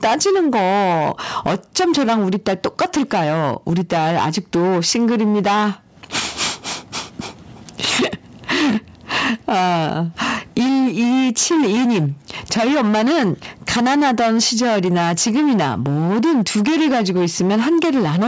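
From start to finish, the speech is driven about 15 dB past what a stage in the chain can pass, so its peaks are cut flat. This is hard clipping, with roughly a fifth of the samples cut off at that limit. The flattened tops add harsh harmonics up to the 8 kHz limit of the call microphone processing, giving a constant fuzz on every loud syllable.

Throughout, the gain swings by something like 15 dB, pulled down on each loud sound. That is gain pumping, likely from input gain set far too high with a fast limiter pulling it back on every loud sound. Loud and quiet passages end up squashed to a similar level.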